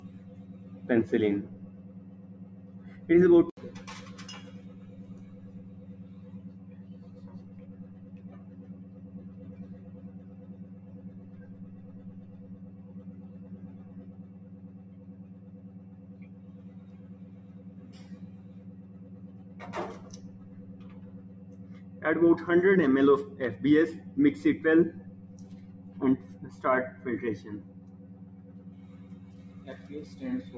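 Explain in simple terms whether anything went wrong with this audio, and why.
A noise suppressor applied to music or sounds runs from start to finish. Built for voices, it treats steady tones and lingering echoes as background noise and keeps turning them down, so sustained parts dip while sharp starts survive, giving a pumping, thinned-out sound.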